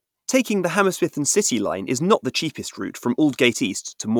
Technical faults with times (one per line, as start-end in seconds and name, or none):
1.22-3.48 sample clock jitter